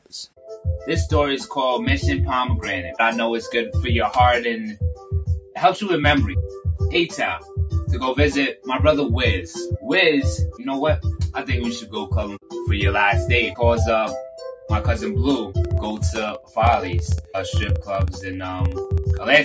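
A noise suppressor applied to music or sounds runs through the whole clip. It treats sustained material as noise, so held tones and decays swing in level by roughly 5 dB while onsets pass, giving a pumping, thinned quality. The band tops out near 8 kHz from the call microphone processing.

Sound cut by the noise suppressor is heard at 0.0 to 0.5 s (about 11 dB down), 4.95 to 5.12 s (about 7 dB), 5.4 to 5.56 s (about 11 dB), 7.39 to 7.57 s (about 8 dB) and 16.39 to 16.57 s (about 10 dB). Each time, the sound briefly sinks or has its tail clipped.

Periodic USB or driver dropouts run from 15.65 to 19.36 s. Every 64 ms, around a millisecond of audio drops to silence, roughly fifty times in all. This is heard as an even train of ticks at about 16 per second, riding on the signal.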